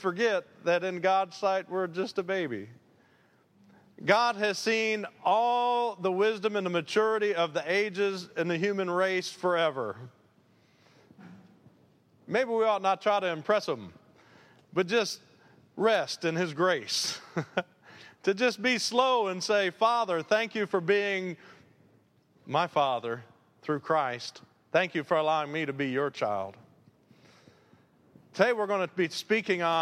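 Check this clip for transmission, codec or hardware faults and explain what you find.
No faults turn up anywhere in this clip. There is nothing in the audio that calls for a technical explanation.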